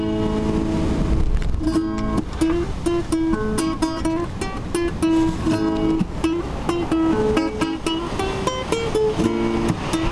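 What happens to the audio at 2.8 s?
Nothing goes wrong at 2.8 s; the audio plays through that moment intact, with no dropout, click, glitch or other fault.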